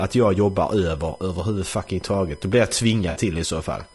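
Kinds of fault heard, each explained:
USB whine: Current drawn by the USB bus in 1 ms frames leaks into the audio through the power or ground path, producing a fixed-pitch whine. Here it runs through the whole clip as a tone on a 1 kHz fundamental with a series of harmonics, the strongest sitting at 5 kHz. It lies around 35 dB below the speech, so it is most noticeable in pauses, where the steady high whistle is exposed.
Low-delay AAC compression: The speech has a rough, grainy texture throughout, with noise filling the gaps between voice harmonics and a thin, somewhat artificial top end. This points to the likely cause being AAC-ELD, the low-delay AAC used for calls. Its short frames resolve pitch harmonics poorly and spend bits inefficiently, and the degree of damage fits a rate around 32 kbps. The coding damage is plainly audible across the entire clip.
AAC frame loss with concealment: When coded frames go missing, the decoder fills the gap by extrapolating from the last good spectrum, which produces a smeared, noisy patch instead of clean audio. 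Here this happens from 3.09 to 3.19 s, with about 60 ms of audio replaced, which fits roughly three lost frames. The gap is short enough that concealment covers it without fading to silence, so it is heard as a brief blurred, phasey smudge in the speech.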